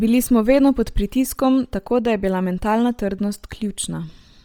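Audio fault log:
throughout: Bluetooth LC3 compression, likely; heavy grainy, breathy texture on the speech as upper-band detail gives way to noise fill, consistent with a 32 kbps stream using 10 ms frames.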